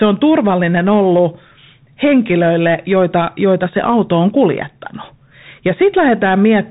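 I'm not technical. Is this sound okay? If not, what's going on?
No. The speech sounds muffled and boxy throughout, with scratchy s sounds and a fine grainy hiss underneath. That's the Bluetooth CVSD headset codec: the headset squeezes sound into a crude up-or-down signal, and it keeps nothing above about 3.8 kHz.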